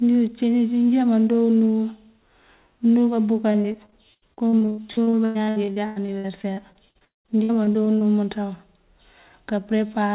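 Repeated packet loss (robotic sound) runs from 3.52 to 8.03 s: dozens of dropouts, the longest about 0.2 s, each patched by stretching the last sound and together covering about a third of it. Speech turns choppy over the 4 kHz-limited call path.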